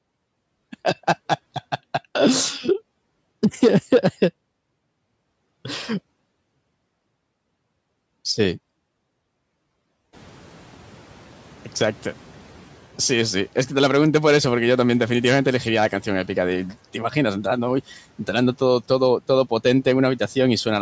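A speech clip in which the room noise jumps by about 16 dB at around 10 s, and the noise suppressor is caught catching up: from 10.13 to 12.8 s the louder noise passes through less reduced, then sinks by about 5 dB over those 2.67 s as the estimate adapts. Unlike a gate, the noise fades smoothly rather than switching.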